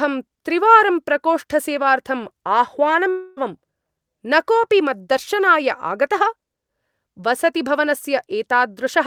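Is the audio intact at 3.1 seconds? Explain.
No. From 3.09 to 3.39 s the speech turns into a fading buzz or hiss that stretches the last sound for about 0.27 s without falling silent, then resumes with about 0.28 s lost. This is likely a long network dropout, concealed by the receiver.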